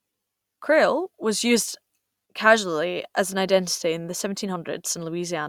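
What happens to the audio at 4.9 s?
Nothing goes wrong at 4.9 s: the speech runs on intact through that moment, with no dropout, click or distortion.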